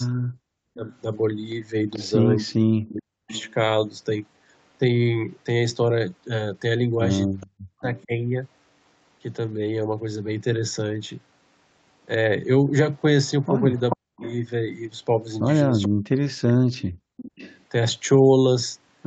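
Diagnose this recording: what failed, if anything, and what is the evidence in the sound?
Call echo cancellation likely mishandled double talk. Speech suppressed in double talk dips by up to about 40 dB at 0.26–3.31, 7.43–8.12, 13.95–14.23 and 15.87–17.08 s.

The far end's echo canceller likely left loudspeaker residue, causing an echo leak. A copy delayed by 436 ms, about 20–25 dB below the voice, returns at 0.86–3.54, 7.4–8.05 and 12.71–17.63 s.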